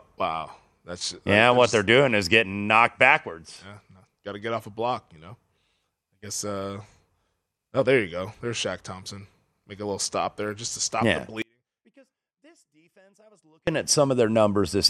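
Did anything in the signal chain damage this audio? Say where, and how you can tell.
Yes. An audio dropout to a faint residue hits at 11.42 s, just after "to stop yeah the", lasting 2.25 s to 13.67 s. A faint sound about 40 dB down persists, so the downstream path stayed live, likely behind an intermittent analogue connection. Unlike a pause or fade, the cut is abrupt.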